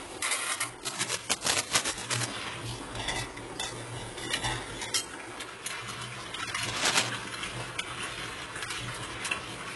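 A recording of everyday sounds, squeezed through what's likely HE-AAC compression at a very low rate, something like 12 kbps. Nothing is left above 11.5 kHz, and the replicated treble sounds gritty and metallic throughout. There's also cable scratch noise, rough rustling bursts from 0.83 to 2.26 s and again from 6.68 to 7.09 s, sitting a little louder than the sound itself. That's most likely a worn cable or connector being moved.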